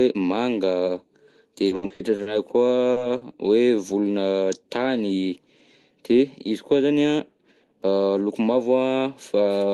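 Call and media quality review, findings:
Repeated packet loss (robotic sound), 1.67–2.29 s: choppy stretch with six concealed gaps, longest 70 ms, nearly half the span patched. Unlike a single concealed loss, holes recur back to back.

Jitter buffer slow-down, 2.44–3.29 s: playout stretched to 91% speed, about 85 ms added by repeating pitch periods. Pitch stays unchanged, so it drags.

Short concealed packet loss at 2.93–3.00 s and 3.18–3.25 s: brief smear or wobble where about 40 ms was synthesised from the preceding sound. Isolated events, not the sustained robotic texture of repeated loss.

Jitter buffer speed-up, 5.15–5.37 s: audio hurried to 116% speed as roughly 40 ms of pitch periods are cut to drain an overfull buffer. Pitch is preserved.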